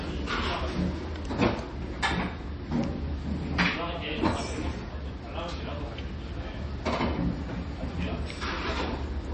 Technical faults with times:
0.00-9.34 MP3 compression

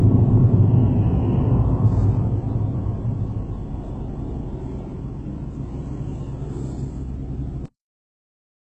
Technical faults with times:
0.00-8.78 HE-AAC compression
7.66-8.78 cut-off end

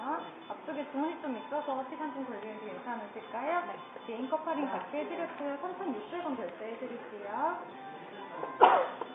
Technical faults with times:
0.00-9.14 low-delay AAC compression

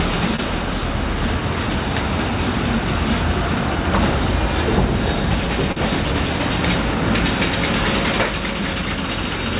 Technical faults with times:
0.36-0.40 short concealed packet loss
5.72-5.78 short concealed packet loss

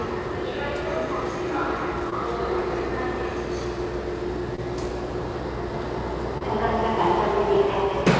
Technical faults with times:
2.10-2.13 short concealed packet loss
4.55-4.60 short concealed packet loss
6.38-6.42 short concealed packet loss

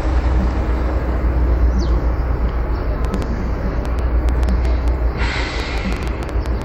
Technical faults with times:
3.05-6.63 train of clicks

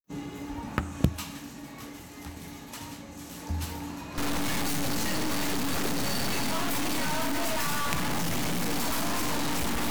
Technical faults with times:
4.18-9.90 low bit depth without dither

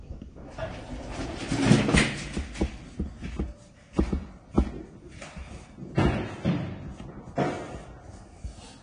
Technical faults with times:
0.00-8.83 AAC compression

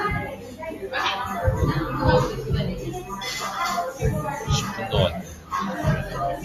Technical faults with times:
0.00-6.45 noise suppressor applied to music or sounds
0.29-0.87 sound cut by the noise suppressor
5.21-5.52 sound cut by the noise suppressor

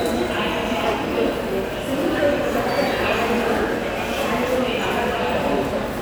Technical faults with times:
none

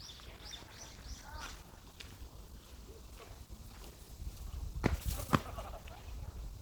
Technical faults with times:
0.00-6.61 Opus compression

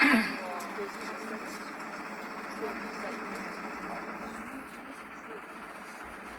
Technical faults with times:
0.00-6.39 Opus compression

